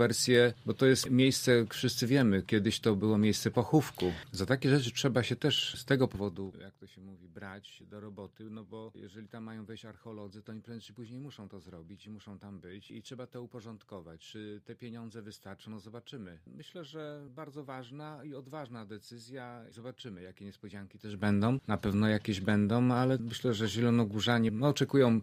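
From 6.06 to 6.78 s the level drops by roughly 15 dB in 1 dB steps, about twenty a second, with no smoothing between them. That is zipper noise: each jump leaves a small click, so the fade ticks audibly instead of gliding.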